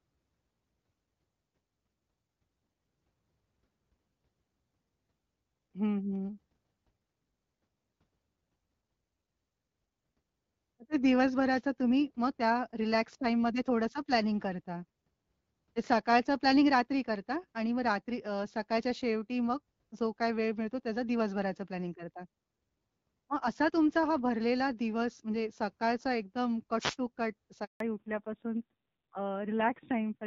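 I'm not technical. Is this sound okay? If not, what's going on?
No, the speech has three kinds of trouble.

Wireless microphone noise hit, at 11.48 to 11.62 seconds and 26.78 to 26.96 seconds: the microphone's radio signal briefly faded, so receiver hiss swelled into a short burst of static.

Handover gap, from 27.64 to 27.80 seconds: the phone switched the call between networks, and for those 160 milliseconds no sound got through, leaving a brief silence.

Fallback to narrowband, from 27.80 seconds to the end: after that switch the call dropped to an older, lower-quality phone format. Everything above 4 kHz is gone, so the voice sounds duller and rougher.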